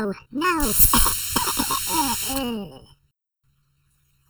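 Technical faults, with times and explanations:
Throughout: channel delay (comb filtering). One channel arrives late by somewhat under a millisecond, and the mono sum cancels shared content at evenly spaced frequencies, with the first notch around 700 Hz. The fixed notches give the sound a hollow, phasey colour.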